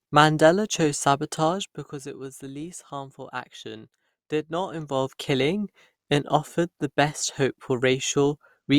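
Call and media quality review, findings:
Zipper noise, 1.43–2.08 s, just before "it was the least": fine ticking while the level drops by roughly 10 dB. 4.58–5.16 s, between "least harmful action did" and "killing and offered the": the same ticking while the level rises by about 10 dB. Probable cause is a gain stage stepping the level around 150 times a second with no smoothing. The buzz rides only on the ramp itself, unlike a clean fader move.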